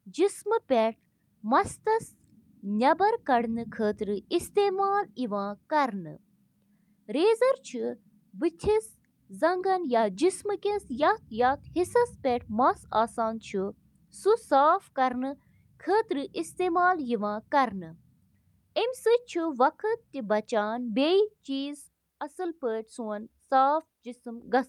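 No audible technical faults.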